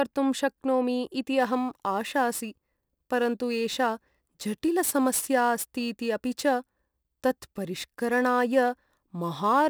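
From about 1.40 s to the end, the speech picks up a gritty, inharmonic fizz from crude rate conversion. Samples are simply dropped rather than filtered, which fits a 48 kHz to 44.1 kHz change. The error sits roughly 25 dB under the speech and clings to louder, brighter sounds.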